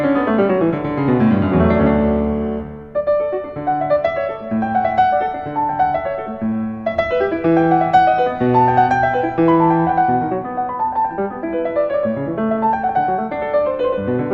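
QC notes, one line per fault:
No faults heard anywhere in this clip.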